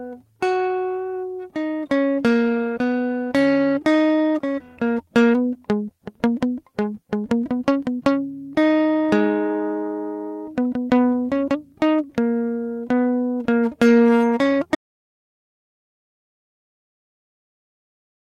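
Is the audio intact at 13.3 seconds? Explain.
Yes, the music plays through 13.3 seconds without any audible fault at that moment.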